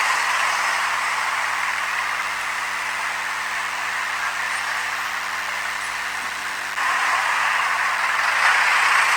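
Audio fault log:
Throughout: DECT cordless phone buzz. A steady, thin buzz sits under the sound at a fundamental of 100 Hz, with a dense stack of harmonics above it that gives it a rasping edge. Its level is well below the wanted signal, roughly 15 dB down, but it never stops. A nearby DECT handset or base transmits a short radio burst every 10 ms. The audio circuitry rectifies that burst into the signal path, so each burst becomes a sharp pulse at a 100 Hz rate.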